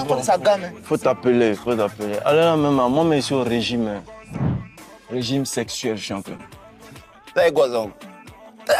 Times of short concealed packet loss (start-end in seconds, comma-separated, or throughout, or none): 6.37-6.41